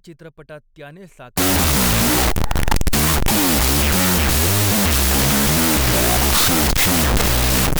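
A speech clip with a wrong sample width fault from 1.38 s, just after "चित्रपटात त्याने", to the end. The sound turns to loud hiss with the speech buried inside, at half speed and an octave low, which fits 16-bit samples read as unsigned 8-bit: each sample splits into two bytes. That halving of speed distinguishes it from a byte-order swap, which gives harsh noise at the original speed and pitch.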